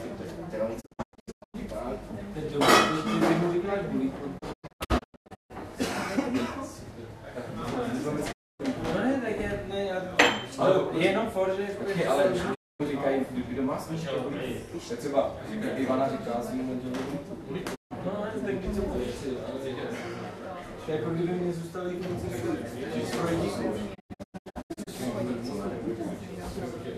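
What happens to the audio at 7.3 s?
Nothing goes wrong at 7.3 s; the sound plays through that moment intact, with no dropout, click or distortion.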